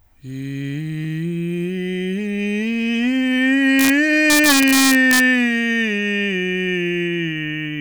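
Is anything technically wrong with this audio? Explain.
Yes. This music has integer overflow at 3.79 to 3.90 s and 4.30 to 5.20 s, the second driven about 3 dB harder. Loud peaks exceed the integer limit and wrap to the opposite sign instead of flattening. The result is violent cracks, far harsher than clipping's buzzy, squared-off distortion.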